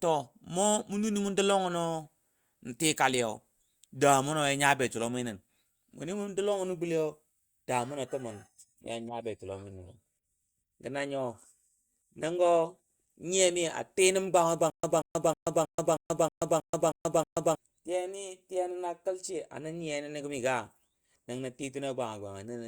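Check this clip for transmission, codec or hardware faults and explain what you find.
There's one fault here, a stutter with silent gaps, from 14.7 to 17.55 s, right after "tii nəm gwanga". A short burst of about 183 ms keeps coming back, nine times over, each followed by about 134 ms of dead digital silence, so it pulses every 317 ms or so. The likely cause is a stalled player or stream replaying its last buffered fragment on each retry and then running dry. Whatever should have played during those seconds is simply gone.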